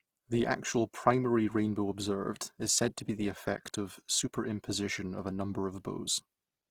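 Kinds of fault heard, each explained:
Opus compression: full-bandwidth speech turns grainy and rough throughout, bands noise-filled under bit starvation, likely CELT music mode near 16 kbps.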